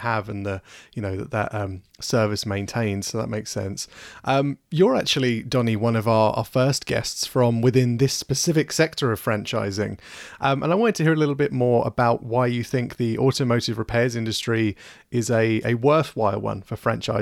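Speech recording with no audible technical faults.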